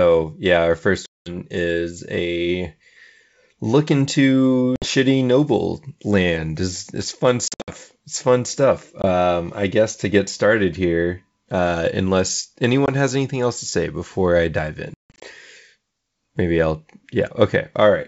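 Packet loss on an ADPCM call cuts hard silent holes at 1.06 s (200 ms, after "yeah our first"), 4.76 s, 7.48 s (scattered, after "it's fun"), 9.02 s, 12.86 s and 14.94 s. Each gap desynchronises the decoder's predictor and step size, so speech returns slightly distorted before settling.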